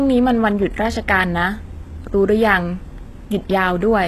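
Speech throughout, with gritty, lispy s sounds, a synthetic-sounding treble and nothing above 12.3 kHz, likely HE-AAC compression rebuilding the upper band from copied lower bands at a low bitrate around 16 kbps.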